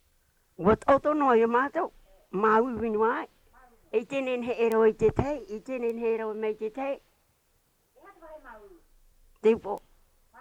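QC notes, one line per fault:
4.72 s, 5.90 s and 9.78 s, bit error spike: each is a single corrupted sample whose value jumps by a power of two and snaps straight back, heard as an isolated broadband tick unrelated to the sound around it, peaking at about -12 dBFS at 4.72 s and about -25 dBFS at the other two.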